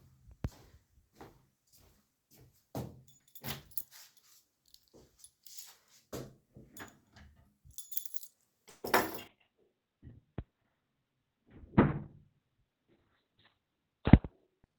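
A recording of everyday sounds with three call-path faults. From 8.69 to 8.85 s there is a call audio freeze: the sound is stretched into a fading buzz or hiss, ending in about 20 ms of silence before resuming, likely from delayed packets draining the jitter buffer. From 9.28 s to the end, a call bitrate drop takes the encoder from 32 kbps to 6 kbps, with bandwidth falling from 20 kHz to 4 kHz, so the audio turns coarse and muffled. Between 12.68 and 14.56 s a jitter buffer speed-up trims roughly 150 ms of short pitch-period pieces, running the sound about 7% fast at unchanged pitch.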